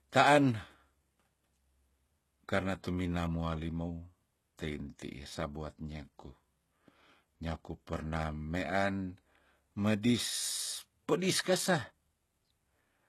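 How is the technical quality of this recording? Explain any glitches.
The recording is clearly compromised by heavy compression from start to finish. The s sounds come out gritty and lisping, the upper range has a metallic, synthetic sheen, and nothing is present above 12.3 kHz. This is likely HE-AAC compression at a very low bitrate, around 16 kbps. The codec stores only the lower spectrum faithfully and fakes the treble by copying lower bands upward, so those rebuilt highs never quite match the real speech.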